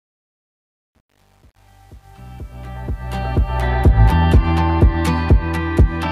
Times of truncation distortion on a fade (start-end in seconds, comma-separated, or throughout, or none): 0.00-3.67